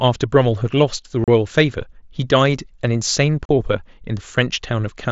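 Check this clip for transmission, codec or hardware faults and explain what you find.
There are two brief dropouts from unconcealed Bluetooth headset packet loss. The first runs from 1.24 to 1.28 s. The second runs from 3.45 to 3.49 s. Each gap lasts about 37.5 ms, which fits roughly five lost voice frames. The link between headset and phone failed to deliver those frames. Nothing filled the gap, so silence or an idle pattern replaced the speech. The holes have abrupt edges. The mSBC wideband codec underneath carries the speech with only light coding grain.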